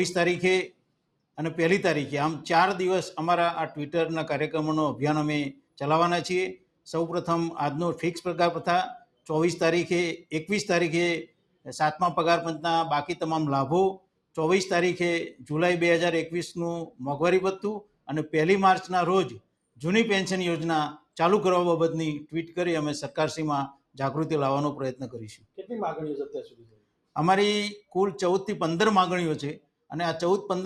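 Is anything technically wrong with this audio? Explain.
Yes. A noise suppressor applied to music or sounds stays on throughout. It treats steady tones and tails as noise. Level swings by roughly 5 dB, so sustained sound pumps and thins.

There are four spots of sound cut by the noise suppressor: 0.68 to 1.36 s, 5.53 to 6.87 s, 8.99 to 27.95 s, and 29.57 to 29.91 s. The suppressor clamps parts it judges to be noise. They drop by about 19 dB, or about 18 dB at the last spot. Each of the first two loses about half a second. The long stretch loses about three seconds in scattered dips, and the last spot loses only a brief moment.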